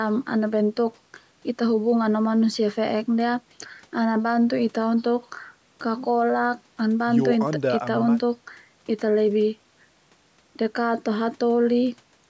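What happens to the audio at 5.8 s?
Nothing goes wrong at 5.8 s: the speech carries on intact through that moment, with only the normal band limit of the call's microphone processing, which removes the lowest bass and leaves nothing above 8 kHz.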